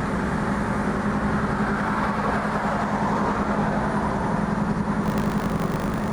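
From 5.02 s to the end of the clip, the program filling the ring buffer and the hardware draining it have slipped out of step, so they cross inside every period: buffer tearing. A small slice of each buffer, a little under a tenth, replays audio from one lap earlier, roughly 70 ms old, with hard joins on both sides. The sound takes on a robotic buzz at 50 Hz, which fits a 20 ms period, present only while there is signal.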